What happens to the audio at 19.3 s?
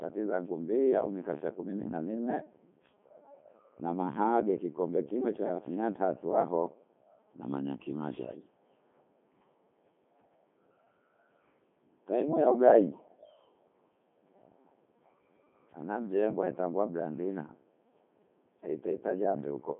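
At 19.3 s the speech is still passing through the Codec 2 vocoder, which fits its 3.2 kbit/s mode: resynthesised from pitch and envelope, it sounds robotic and buzzy, with nothing above 3.7 kHz.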